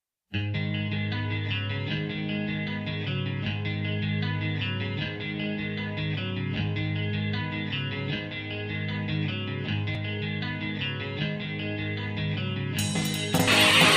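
Nothing stood out as a technical problem on listening.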